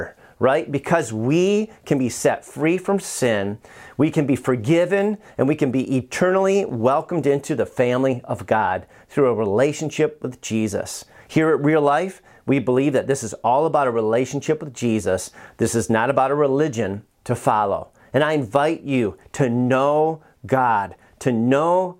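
A speech recording with nothing technically wrong with it.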